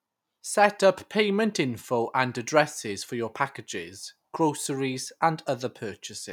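No technical faults can be heard anywhere in the speech, so there is nothing to report.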